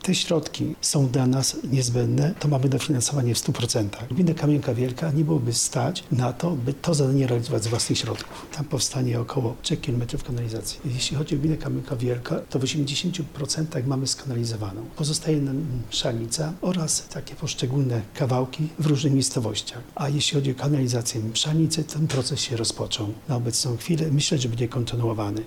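Nothing is technically wrong with this audio.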